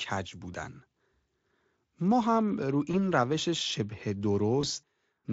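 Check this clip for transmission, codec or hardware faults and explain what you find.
Two short transmission faults are present, both VoIP packet loss concealed by the speech codec; the Speex coding itself shows only light damage.

At 2.91 to 3.00 s and 4.61 to 4.66 s, one 20 ms packet drops. The decoder extrapolates the previous pitch and filter, giving a brief buzzy or noisy, fading smear.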